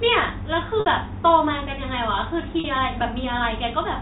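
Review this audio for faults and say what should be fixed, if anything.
Packet loss with pitch repetition at 0.80–0.86 s (60 ms) and 2.60–2.64 s (40 ms), in this G.711 telephone-band speech. Each gap fits about three and two 20 ms packets and is bridged by repeating the last pitch period. The result is a brief held, buzzy tone rather than the abrupt silence or click of an unconcealed dropout. A larger jitter buffer or forward error correction on the network link would prevent these losses.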